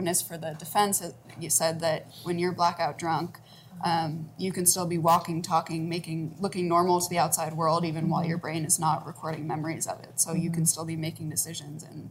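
No technical faults are audible.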